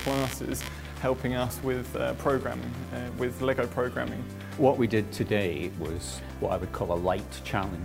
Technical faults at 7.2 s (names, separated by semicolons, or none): none